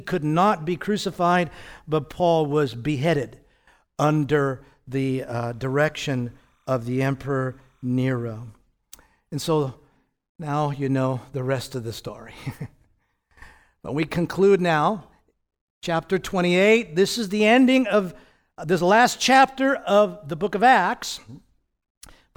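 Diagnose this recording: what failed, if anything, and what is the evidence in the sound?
Timecode bleed in the analogue wiring. Right after "under the", from 5.42 to 8.50 s, a faint chirping warble sits behind the speech, around 45 dB down, flipping between roughly 1 and 2 kHz. That two-pitch pattern is linear timecode's square wave, and its rhythm fits 29.97 fps code. It's leaking in from a neighbouring track or a cable run alongside the audio, probably through crosstalk, for about three seconds.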